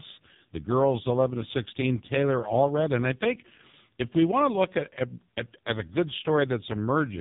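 From start to finish the speech carries heavy AMR narrowband mobile codec damage. The encoder rebuilds each 20 ms frame from a vocal-tract filter excited by a handful of pulses, and the thin, buzzy, synthetic tone fits AMR-NB's lowest 4.75 kbps mode. On a spectrogram, energy stops abruptly at about 3.8 kHz, leaving an empty band above, while harmonics below look smeared and blocky frame to frame. The waveform appears coarse and over-regular.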